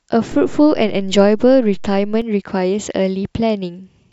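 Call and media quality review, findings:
DC step in converter or input path: waveform zero line jumps at 0.32 s, offset about -26 dBFS, holds to 2.22 s, then steps back. Each transition heard as low thump or click at 0.32 s and 2.22 s; speech continues unchanged underneath.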